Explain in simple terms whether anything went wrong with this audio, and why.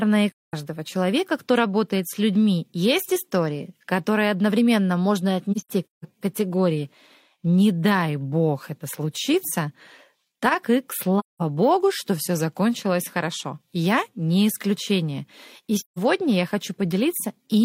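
AAC frame loss with muting causes the speech to drop out at 0.31–0.54 s, 5.52–6.05 s (several short gaps, the longest around 150 ms), 11.19–11.42 s and 15.78–15.99 s. Chunks of compressed audio went missing, and the player filled them with silence, fading smoothly out and back in, so the holes sound soft-edged.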